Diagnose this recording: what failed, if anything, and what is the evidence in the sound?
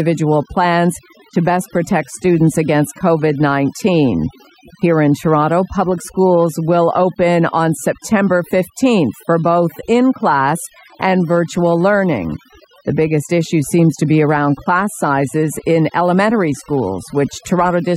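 The call-processing stage failed: overdone noise removal was applied across the whole recording. The suppressor was set too strong, so individual frequency bands near its noise estimate were cut deep or gated off entirely, taking the quieter parts of the voice with them. The result is a background that drops and breaks up into twinkling, isolated specks.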